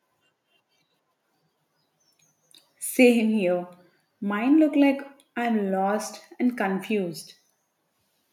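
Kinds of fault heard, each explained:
No technical faults can be heard anywhere in the speech recording. There is nothing to list under any kind of fault.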